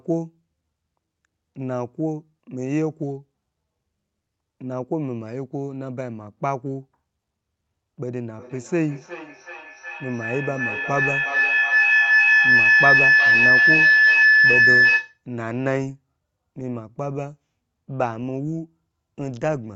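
Feedback howl takes over this speech recording from 8.37 s to 15.23 s. Two devices on the same call share a room, so sound from one loudspeaker re-enters the other microphone and comes back louder on every pass. Instead of dying away, the repeats collapse onto a tone around 2 kHz, with the loop's round-trip delay at roughly 400 ms, and swell to about 9 dB above the speech before it breaks off.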